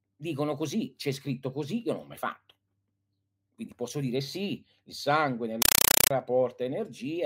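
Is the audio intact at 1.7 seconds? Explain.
Yes, at 1.7 seconds the speech plays through intact, with no dropout, click, distortion or other fault at that moment.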